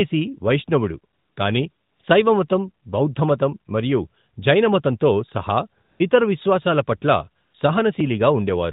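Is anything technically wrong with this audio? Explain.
Yes. The phone's voice-activity detection decided the talker was silent and stopped sending speech frames, so the receiver filled those gaps with AMR comfort noise. This happens at 1.14–1.36 s; at 1.72–2.00 s, right after "వైష్ణవుడు కానీ"; again briefly at 2.02 s, before "శైవమతం బౌద్ధమతం మరియు జైనమతంతో"; at 5.82–6.00 s, between "బౌద్ధమతం మరియు జైనమతంతో సహా" and "ఇతర విశ్వాసాల"; and at 7.44–7.54 s. In each gap the real background is swapped for a smooth, steady synthetic hiss that cuts in and out abruptly. The narrowband AMR-NB coding underneath adds only light damage, with nothing above 4 kHz.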